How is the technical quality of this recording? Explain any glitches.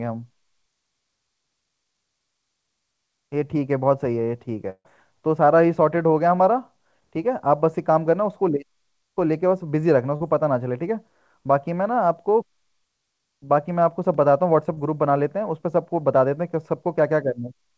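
The recording has three dropouts from lost network packets. The call path, whose band stops at 8 kHz (consistent with G.722 at 64 kbps), limits the top end.

Burst of packet loss, 4.70 to 4.87 s: about 140 ms of audio never arrived. The receiver extended the last sound for roughly 150 ms, fading it into about 50 ms of silence. You hear the last sound held and decaying. On a spectrogram this appears as a frozen spectrum dimming into a blank gap.

Short concealed packet loss, 10.17 s and 14.74 s: the receiver filled 40 ms and 20 ms holes by continuing the preceding sound for 35 ms and 26 ms, then blending back. The second event also trims about 7 ms. Each is a brief smear or wobble.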